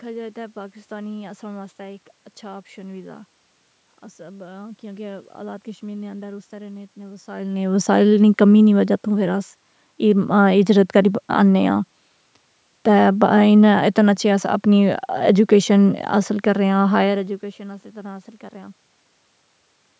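Nothing here points to a technical fault.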